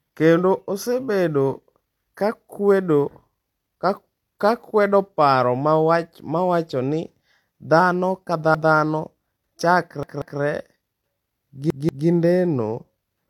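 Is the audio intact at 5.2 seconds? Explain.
No. Low-bitrate audio saved at a high bitrate affects 5.2 s, as it does the whole clip. The speech carries the artefacts of a low-bitrate encoding, likely an earlier HE-AAC pass near 40 kbit/s later re-encoded as 192 kbit/s MP3, which cannot restore the lost detail. Nothing sounds above 18.4 kHz.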